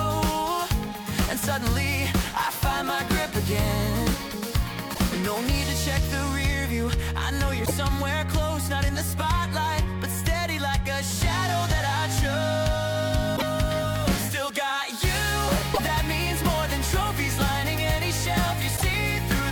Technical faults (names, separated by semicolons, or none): damaged data in a compressed stream